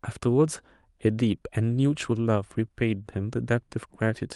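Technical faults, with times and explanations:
No technical faults can be heard in the speech. It has the sound of a call path, with the top end stopping at 12 kHz, which points to a call codec such as Opus set to that bandwidth.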